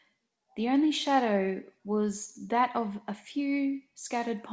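No technical faults can be heard in the speech, which has come through a call path whose band stops at 8 kHz, as fits G.722 wideband coding.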